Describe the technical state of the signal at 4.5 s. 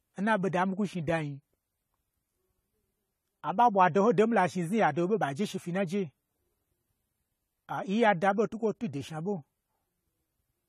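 At 4.5 s the speech is dull and smeared with a fizzy warble, likely AAC compression throughout, fitting a low 32 kbps rate; spectrograms show a lowered cut-off.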